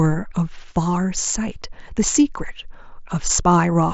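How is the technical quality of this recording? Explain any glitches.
The speech carries no glitches or dropouts, and its band tops out near 7.7 kHz, which fits the wideband mSBC codec of a Bluetooth headset link.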